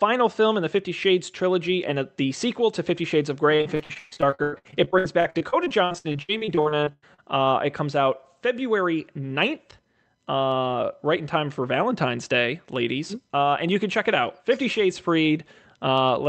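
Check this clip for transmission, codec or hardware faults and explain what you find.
There's one clear transmission fault in the speech: repeated packet loss (robotic sound) from about 3.55 s to 7.2 s. Across that stretch, dozens of short gaps open up one after another, the longest around 140 ms. Each one gets papered over by stretching out the last bit of sound until real audio arrives again. Roughly 39% of that span ends up as patched-in sound, so it comes across choppy, with bits of speech missing. The call codec cuts the band off at about 8 kHz throughout.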